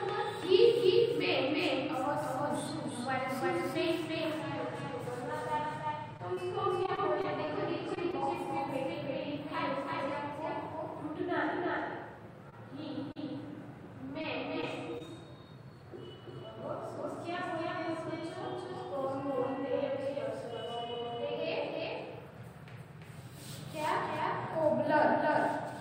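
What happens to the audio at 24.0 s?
At 24.0 s the sound is still carrying a doubled audio track, which runs through the whole clip: a second, equally loud copy trails the original by roughly 0.3 s, giving a clean, dry slapback with no decay or room colour. It is likely caused by the signal being captured twice through paths of different speed. On a waveform every transient appears twice, evenly spaced; a spectrogram shows each full-band event repeated at the same offset.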